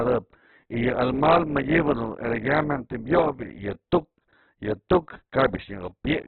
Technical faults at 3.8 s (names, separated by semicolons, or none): Opus compression